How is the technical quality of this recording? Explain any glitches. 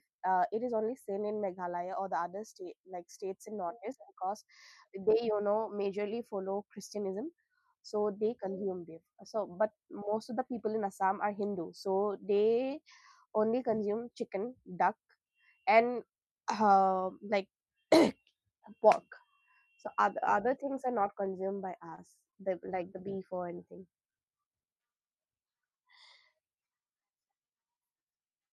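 The recording has one glitch, a brief patch of repeated stalls (stutter) from 21.90 to 22.35 s. Within that half-second the sound hitches four times, as packets reached the receiver late and its jitter buffer ran dry before the next ones came. Each time, the receiver stretched the last bit of sound to cover the wait, about 69 ms in total and no more than 26 ms at once, roughly 15% of the span. Nothing is lost, but the speech briefly drags and catches.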